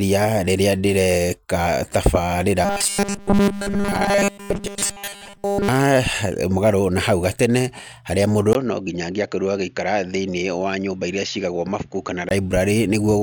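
A speech clip with two faults. From 2.65 to 5.68 s it turns into a rigid metallic buzz at 200 Hz: robotic sound from repeated short buffers, likely because audio arrived too seldom and nearly all of that stretch was filled by repeating 5 ms slices. From 8.53 to 12.31 s, after a 20 ms gap, the sound goes duller and about 5 dB quieter, with a faint new noise floor well below the speech. That is likely the input switched to a poorer device.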